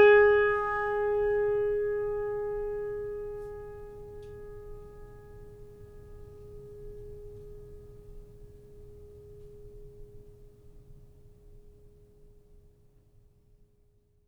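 Music, with no audible technical faults at any point in the clip.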